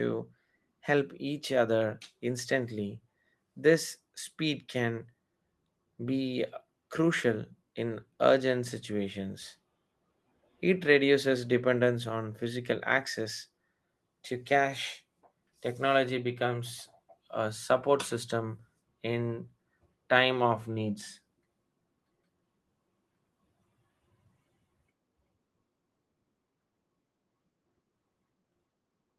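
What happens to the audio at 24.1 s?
Nothing goes wrong at 24.1 s; the speech continues cleanly through that moment with no dropout, click, distortion or other audible fault.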